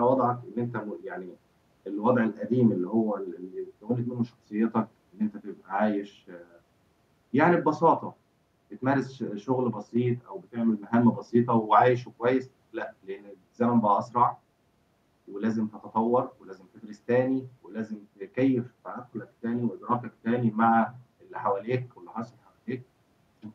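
No technical faults can be heard anywhere in the recording; the speech stays clean throughout.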